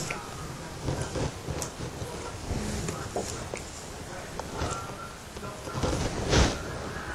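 No technical fault can be heard anywhere in the audio, with the signal holding steady and intact throughout.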